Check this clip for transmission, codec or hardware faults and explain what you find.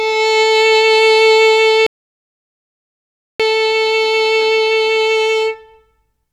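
There is one fault, an audio dropout to silence from 1.87 to 3.40 s. The input signal was likely cut off for those 1.53 s while recording carried on writing silence. The music stops abruptly mid-flow, leaving silence with no background noise, then cuts straight back in.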